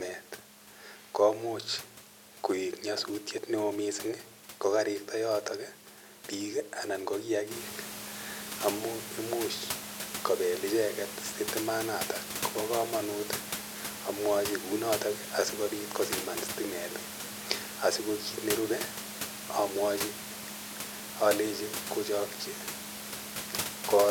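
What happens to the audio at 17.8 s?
Nothing goes wrong at 17.8 s: the speech comes through intact, with only the room's own background noise sitting about 12 dB beneath it.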